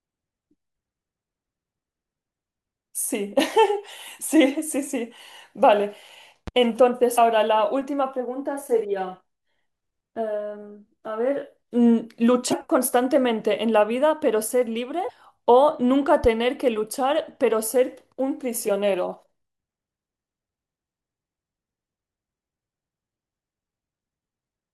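At 6.48 to 6.50 s there's a loud pop, a single sharp click standing a few dB above the speech, which keeps going underneath, likely a voltage glitch from a switch or static. Then come three bits of damaged data in a compressed stream, at 7.14 to 7.18 s, 12.49 to 12.53 s and 15.06 to 15.10 s, each a short glitch where the decoder loses sync on bad frames. A second, similar pop lands at 16.24 to 16.27 s.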